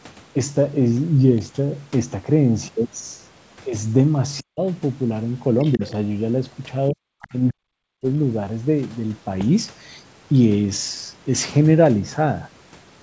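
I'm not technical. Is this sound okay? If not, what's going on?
No. Speech suppressed in double talk happens at 4.41 to 4.62 s, 5.77 to 5.83 s, 6.91 to 7.13 s and 7.30 to 8.09 s. The voice sinks to near silence in the first, third and fourth spots, and briefly thins in the second. This likely happened because someone on the other end spoke at the same moment, and the call's echo remover, unable to tell the two apart, turned everything down.

The other side's voice leaking through appears from 5.59 to 5.91 s and again at 7.21 to 7.28 s. A faint second voice slips in underneath the main one, quiet and fragmentary. The likely cause is that the talker's device played the far end aloud through its speaker, and the echo remover didn't fully scrub that sound out of the microphone before sending it on.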